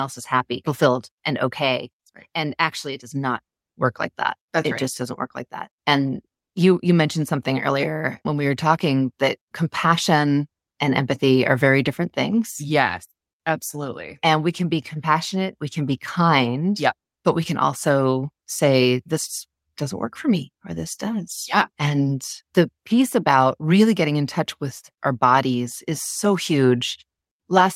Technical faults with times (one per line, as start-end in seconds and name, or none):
none